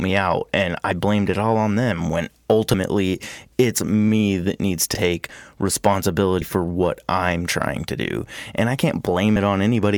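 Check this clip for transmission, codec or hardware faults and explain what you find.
Four short jumps interrupt the speech, where the sound lurches forward. At 2.74 s after "all on them when", roughly one frame's worth of audio vanishes. At 4.94 s after "it's me that needs", about two frames are lost. At 6.42 s before "for what I'm trying", about three are lost. At 9.36 s, about one is lost. These are compressed frames skipped: the decoder never plays whole blocks, so the audio jumps ahead in steps that fit a 32 ms frame.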